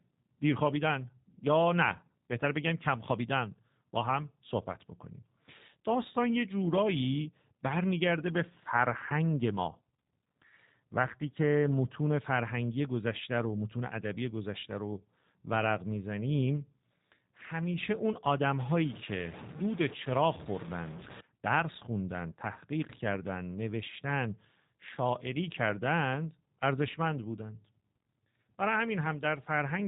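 From start to end, the speech carries plainly audible G.729 codec damage. The codec models the vocal tract and codes pitch and a few pulses per frame, which fits an 8 kbit/s stream. Nothing passes above 3.8 kHz. Voices sound narrow, rough and slightly synthetic.

From 18.6 to 21.2 s, low bit depth without dither appears. The sound turns grainy and gritty, and the distortion moves with the speech. The likely cause is truncation to about 6 bits, with error noise only roughly 15 dB below the signal.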